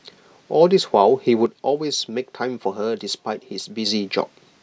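From 1.46 s to 3.86 s the speech drops abruptly by about 6 dB and then snaps back at full level. The clean step, with no fade, matches one channel dropping out, likely a lost stereo side before mono summing rather than a gain change.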